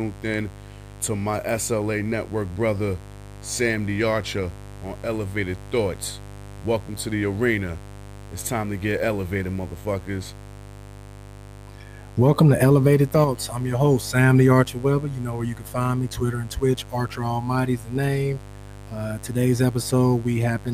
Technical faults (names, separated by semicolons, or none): mains buzz